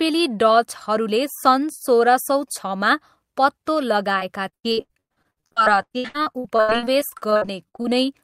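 From 4.19 s to 7.86 s, the speech breaks up with repeated packet loss, giving a robotic sound. Audio packets kept going missing or arriving late. Each hole was patched by stretching the last bit of sound forward. Then the next hole came quickly. There are 35 gaps across this stretch, the longest 101 ms. Concealment covers 37% of the span. The result is choppy, with pieces of speech dropped out.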